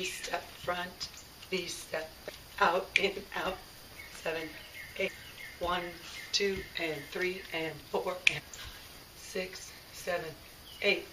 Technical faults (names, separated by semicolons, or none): damaged data in a compressed stream